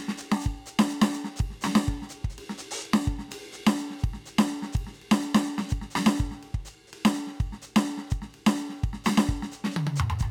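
Throughout the music, a steady 43.1 Hz buzz sits under everything. This is a block size mismatch (truncated): block ends are discarded, consistent with 1024-sample blocks, while tempo stays unchanged.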